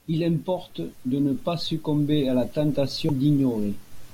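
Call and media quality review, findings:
Damaged data in a compressed stream at 3.09 s in the speech. Corrupt bytes in the encoded payload; the decoder misreads those frames, loses sync and hunts for the next valid frame header. Heard as a brief glitch.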